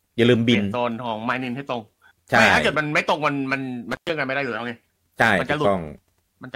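Intermittent contact at 3.92 to 4.10 s: a loose plug or cable connection briefly opens, and the speech drops out for about 120 ms. Crackle marks both edges of the gap as the contact breaks and remakes, with faint hiss left while the line is open.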